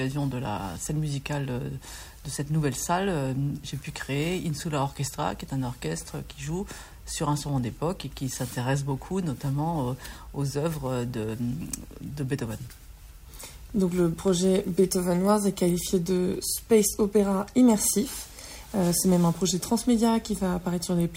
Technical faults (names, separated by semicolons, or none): none